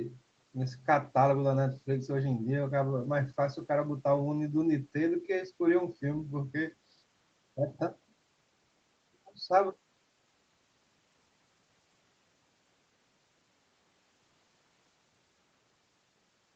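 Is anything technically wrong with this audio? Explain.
No, nothing here is faulty: the speech carries nothing above 8 kHz and has the usual coding texture of a typical call codec, both normal for audio sent over a call.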